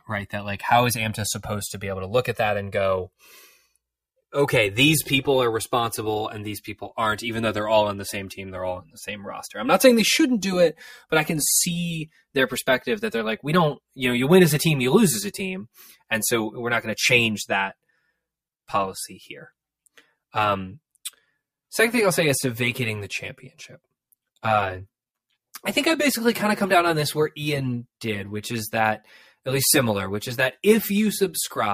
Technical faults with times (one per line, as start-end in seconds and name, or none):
0.00-31.73 channels drifting apart